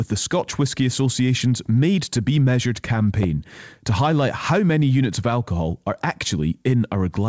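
A loud pop hits at 3.23 to 3.26 s, just before "to highlight how many". A sudden voltage step, likely from a plug, switch or static discharge, entered the signal and gave one sharp pop about 10 dB above the speech, which continues underneath.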